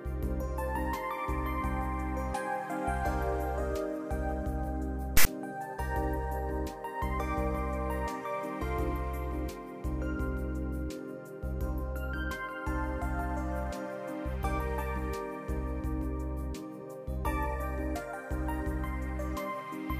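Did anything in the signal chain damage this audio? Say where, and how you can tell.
Yes, at storage: from 5.17 to 5.26 s there's a hard-edged rasp offset to one side, then dead silence. That's file tags played as audio, text then zero padding read as samples.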